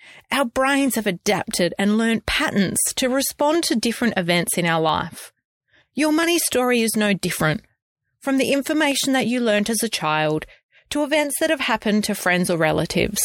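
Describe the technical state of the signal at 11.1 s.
At 11.1 s the speech sits inside a run of clock drift buffer slips spanning 0.20 to 12.94 s: a small click recurs every 0.671 s. This likely comes from two clocks differing by a few hundred ppm, forcing the buffer to drop or repeat a handful of samples each time.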